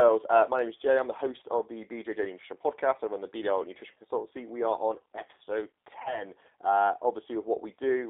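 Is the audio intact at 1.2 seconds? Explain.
No. At 1.2 s, like everywhere else, the speech carries G.729 codec damage: a low-rate model rebuilds it, band-limited to roughly 300 Hz–3.7 kHz, sounding rough and synthetic.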